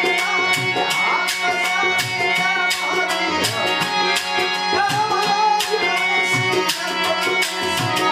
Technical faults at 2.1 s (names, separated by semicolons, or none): none